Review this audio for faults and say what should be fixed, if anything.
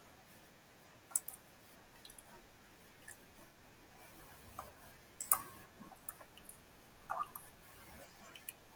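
AAC frame loss with concealment at 3.47–3.57 s: about 85 ms, fitting two lost frames, refilled with a smeared, phasey patch rather than a hard silent dropout. Prevent it with packet redundancy or forward error correction on the transport.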